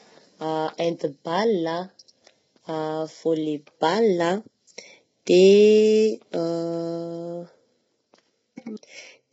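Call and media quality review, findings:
Rough, grainy speech throughout; noise fills the gaps between harmonics, and the top band sounds dull and synthetic, with nothing above 7.8 kHz. Likely low-delay AAC compression (AAC-ELD): short frames smear pitch harmonics, and the heavy damage fits roughly 16 kbps.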